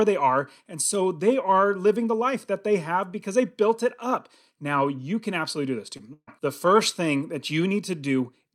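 Just after "can absolutely do this", from 5.97 to 6.01 s, there is short concealed packet loss. About 20 ms of the speech stream failed to arrive in time for the decoder, and the receiver bridged the hole by extending the preceding sound for roughly 18 ms before crossfading back into the real signal. It is heard as a brief smear or wobble in the flow rather than a clean gap.

From 6.13 to 6.29 s, immediately before "the first thing that", a burst of packet loss follows. Around 140 ms of consecutive audio went missing. The concealment stretched the last received sound across that span, letting it decay as the gap lengthened, with about 50 ms dropping to silence. It sounds like a held, fading buzz or hiss and then a resumption, with the speech that belonged in the gap simply gone.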